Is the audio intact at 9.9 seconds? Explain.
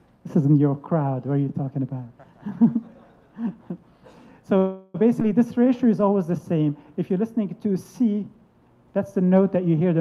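Yes, the audio at 9.9 seconds is intact, with no dropout, click, distortion or other fault at that moment.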